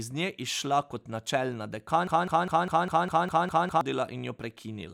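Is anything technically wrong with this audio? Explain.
Yes. From 2.07 to 3.81 s, right after "nje izšla kot načelna", a 0.2 s fragment repeats back to back nine times: a broken-record loop, likely a stalled stream resending its last buffer, so that stretch of speech is lost.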